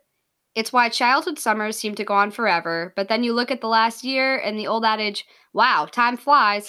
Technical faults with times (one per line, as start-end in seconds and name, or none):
2.35 electrical switching spike